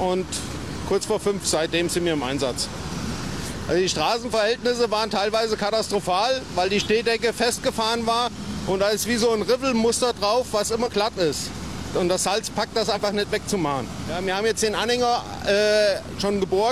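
At 10.82 s and 12.91 s, damaged data in the compressed stream makes the decoder misread frames and resync, giving roughly 60 ms disturbances heard as a chirp, squawk, click or short hole.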